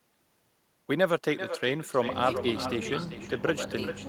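Right from the start and all the way through, the speech carries an echo with no canceller working on it. Each phrase comes back roughly 0.4 s later, about 11 dB down, sounding thinner than the original. That's the far end playing the call out of a loudspeaker, its microphone catching it, and nothing stripping it out before it travels back across the network, so every phrase gets trailed by its own ghost.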